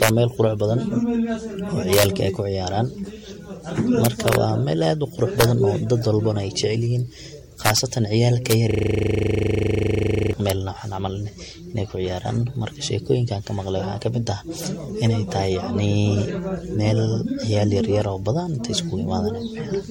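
Throughout the speech, the sound is swirly, smeared and hollow, attacks are blurred, and nothing is present above 16.7 kHz. This points to generation loss, likely from the audio being re-encoded as 64 kbit/s MP3 around five times, each pass adding fresh quantisation noise and spectral holes.

Violent, sharp cracks land on loud peaks at 0.03–0.09 s, just before "wa meel qurux badan", and again at 1.93–2.05 s, 4.05–4.35 s (just before "wa meel"), 5.41–5.44 s, 7.66–7.78 s, 8.51 s and 10.5 s. This is integer overflow: peaks driven about 0 to 3 dB past the integer limit wrap to the opposite sign instead of being limited.

From 8.71 to 10.33 s, a steady buzz at 25 Hz replaces the audio. This is a system hang loop: the system froze while the sound hardware kept replaying the same 40 ms of its buffer, 41 times over.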